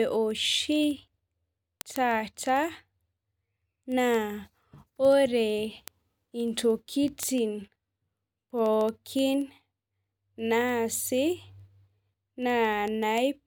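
From 0.16 to 13.40 s, word clock ticks recur about every 70 ms as an unlocked receiving clock slips samples; their steady rhythm distinguishes them from random crackle.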